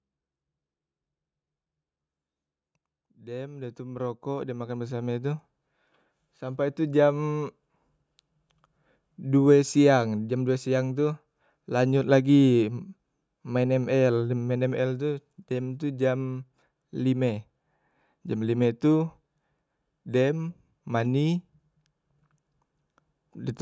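From 3.16 s to 7.05 s you can hear the automatic gain rising: the gain control decided the input was too quiet and kept turning it up, ending roughly 14 dB louder. Because it's a slow ramp over nearly four seconds rather than a jump, the speech and the room noise swell up together, so the background gets noticeably louder along with the talker. The call-style band limit, with nothing above 8 kHz, stays the same throughout.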